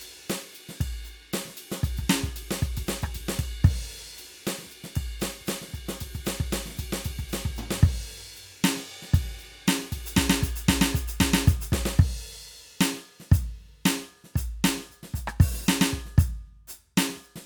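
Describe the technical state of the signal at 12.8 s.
At 12.8 s the music runs cleanly, with no dropout, distortion or other technical fault in the signal.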